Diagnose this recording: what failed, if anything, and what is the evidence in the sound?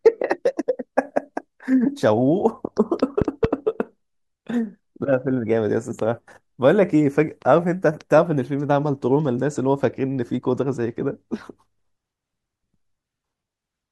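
A loud pop, heard as two sharp thumps between 3.22 and 3.47 s, sits around 15 dB above the speech, which continues underneath. The likely cause is a voltage step in the analogue wiring, from a plug, switch or static discharge, shaped into a double pulse downstream.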